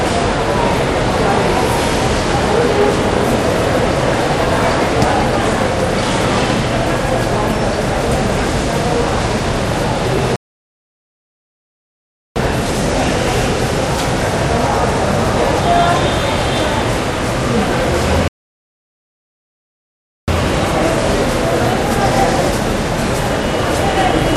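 Playback stalls at 10.36 s and again at 18.28 s interrupt this clip of sounds, each cutting the audio to silence for 2.0 s, until 12.36 s and 20.28 s respectively. The sound halts mid-flow and then carries on, matching what happens when the player is starved of data or its playback thread is held up, likely from a buffer underrun or blocked process, leaving the output empty until it recovers.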